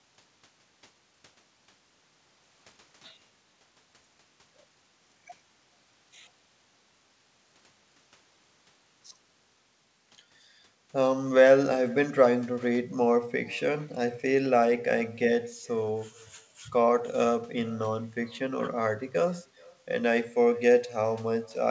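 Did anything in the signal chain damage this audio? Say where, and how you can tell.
Yes, in call processing: echo with no canceller. Throughout the speech, a faint, thinner copy, about 28 dB down, trails each phrase by roughly 0.4 s. The far-end loudspeaker re-enters its microphone uncancelled.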